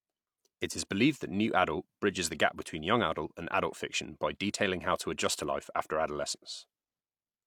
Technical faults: none

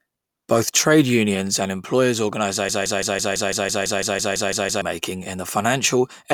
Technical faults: broken-record loop

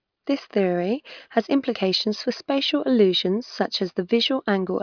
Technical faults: none

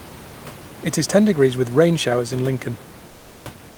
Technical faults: comfort noise in place of the background

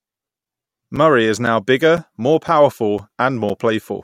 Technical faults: gap between chunks

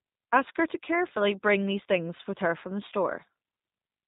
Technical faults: G.729 codec; VoIP packet loss concealed by the speech codec

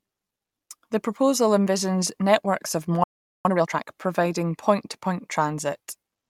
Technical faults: playback stall; time-compressed catch-up

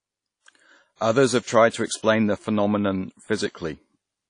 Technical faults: WMA compression

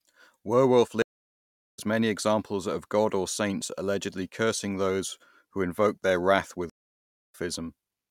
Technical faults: stream reconnect

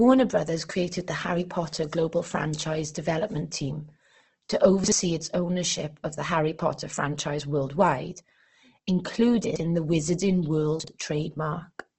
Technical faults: Opus compression; chunks out of order

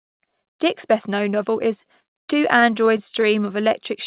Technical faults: repeated stalls (stutter)

